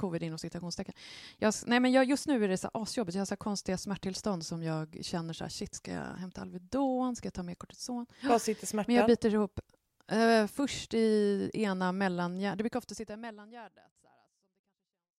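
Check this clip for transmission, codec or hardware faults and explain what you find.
No faults found in the speech; the level tapers in a smooth fade-out from about 12.5 s to 15.2 s, with no click or hard edge, as an editor would apply it.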